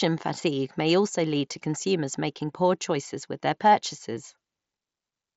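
Nothing goes wrong anywhere in this bit of speech, which comes through a Bluetooth headset link on the mSBC codec, so the top end simply stops at about 7.7 kHz, just as that wideband path normally does.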